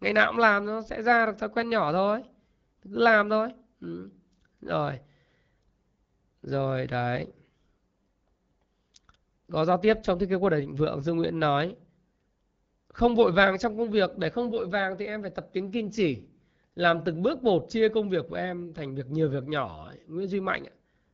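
No technical faults are audible.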